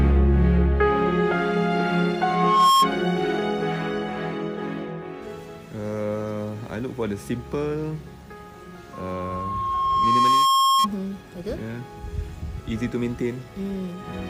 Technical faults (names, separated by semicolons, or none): loudspeaker feedback squeal